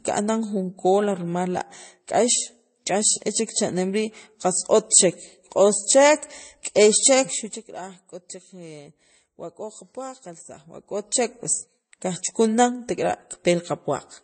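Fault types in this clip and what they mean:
Transcoding between lossy codecs: throughout the speech, nothing is present above 8.4 kHz, and two kinds of coding damage are heard together. This likely comes from an MP3 encode followed by a Vorbis re-encode, both at low rates, around 32 and 41 kbit/s. The second codec spends its few bits on the first one's artefacts and adds its own, while the lowest cut-off in the chain persists.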